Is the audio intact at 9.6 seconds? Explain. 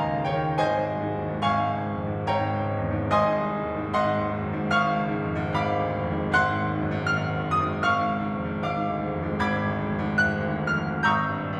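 Yes, at 9.6 seconds the music is intact, with no dropout, click, distortion or other fault to be heard at that moment.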